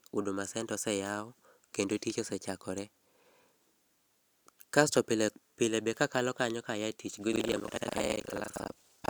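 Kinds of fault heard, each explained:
Buffer tearing: reader and writer cross each period, splicing stale audio into a 25 Hz rattle from 7.32 s, with regular waveform jumps and vertical spectrogram stripes.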